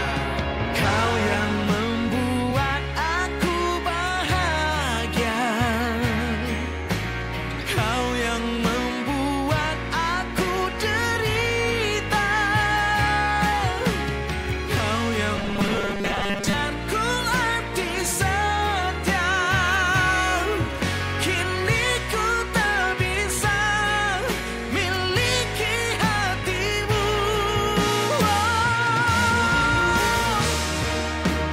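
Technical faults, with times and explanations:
15.37 to 16.54 s, robotic sound from repeated short buffers. The sound turns into a rigid, metallic buzz at 200 Hz that only loosely tracks the original. A 200 Hz rate means a 5 ms stretch is being replayed over and over. The likely cause is audio arriving too late, so the player fills the gaps by repeating its last 5 ms while fresh material is dropped. Most of this section is repeated material.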